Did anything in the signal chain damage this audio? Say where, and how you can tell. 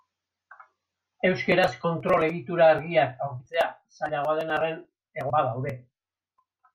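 Yes. Compressed frames were skipped at the decoder: at 1.83, 3.39 and 5.29 s the speech jumps ahead by whole 21.3 ms frames.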